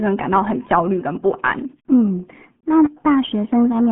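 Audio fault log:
throughout: RealAudio 14.4 codec. Nothing passes above 3.8 kHz, and the speech sits in a narrow 150 Hz to 3.4 kHz band, so it sounds muffled and thin. Heavy low-bitrate coding adds a gargly, watery texture, which fits an 8 kbit/s dial-up-era speech codec.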